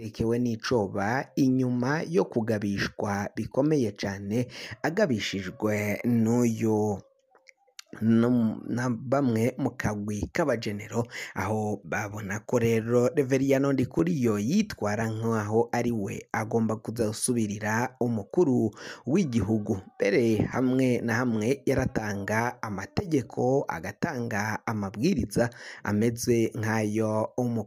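A brief frozen instant at 13.99 s and again at 20.52 s: the sound stops dead for about 2.9 ms, then resumes. These are underruns with held sample. The output buffer ran dry for 128 samples, and the converter held its last value flat instead of dropping to zero. Roughly 3 ms of audio was lost each time, so the restart lands at a jump.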